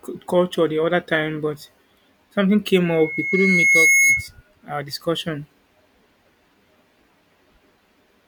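Speech clip with a loudspeaker feedback squeal from 2.85 to 4.28 s, ending just before "our discussion". A single tone at 2.2 kHz swells over roughly a second to about 5 dB above the speech, as the mic catches its own speaker and that frequency runs away.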